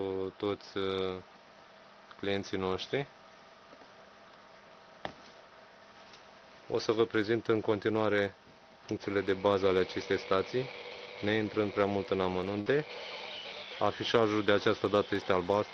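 A burst of packet loss runs from 12.60 to 12.68 s. Packets went missing and the receiver covered about 55 ms by stretching the last sound and letting it fade, then picked up again with about 60 ms of audio skipped, so the sound jumps ahead.

A lost packet rebuilt from error correction falls at 12.66 to 12.68 s, the final 20 ms of that gap. The next packet held a low-bitrate Opus copy of the lost one, which the decoder played instead, giving a rougher, noisier frame than its neighbours through the 6 kHz call path.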